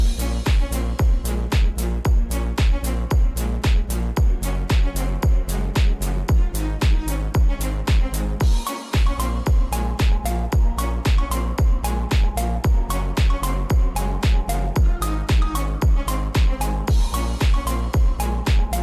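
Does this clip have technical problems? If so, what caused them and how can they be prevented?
No, nothing in this clip stood out as a technical problem on listening, so there is nothing to trace back or prevent.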